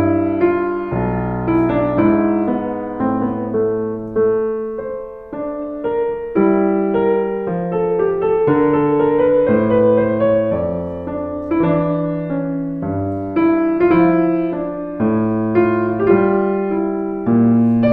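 No technical faults can be heard anywhere in it.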